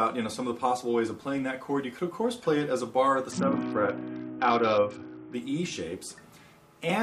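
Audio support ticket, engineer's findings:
Treble dulls and gritty noise rises, 3.31 to 5.34 s, then clears. Bluetooth SBC bit pool drop: congested link starves the encoder, which drops the top sub-bands and coarsely quantises the rest. The loss fits a bit pool falling from 31 to 7, near 61 kbps.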